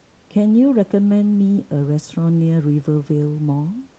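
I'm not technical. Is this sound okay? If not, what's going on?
Yes, nothing goes wrong anywhere in this speech recording.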